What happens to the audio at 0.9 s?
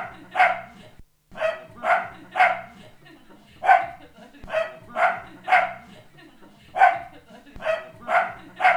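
Nothing goes wrong at 0.9 s; the everyday sound plays through that moment intact, with no dropout, click or distortion.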